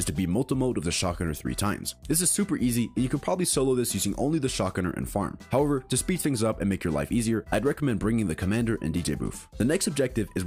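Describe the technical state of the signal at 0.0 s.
At 0.0 s the signal is intact, with no audible fault at that point.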